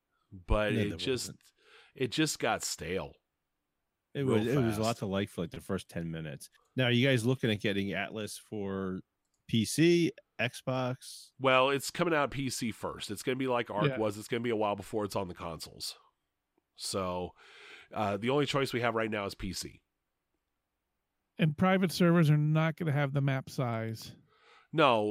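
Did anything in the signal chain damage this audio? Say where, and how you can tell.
No, nothing in this speech recording stood out on listening as damage from any stage of the signal chain.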